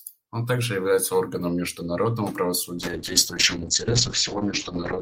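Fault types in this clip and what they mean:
call bitrate drop: from 2.78 s the encoder falls from 32 to 7 kbps and bandwidth narrows from 20 kHz to 8 kHz, leaving the speech rough and muffled to the end.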